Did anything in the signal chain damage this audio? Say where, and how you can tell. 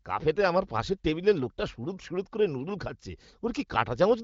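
No, nothing in the chain damaged this speech; it comes through an AMR wideband (HD Voice) codec at a rate that fits about 18 kbit/s, which accounts for the band stopping near 7.5 kHz.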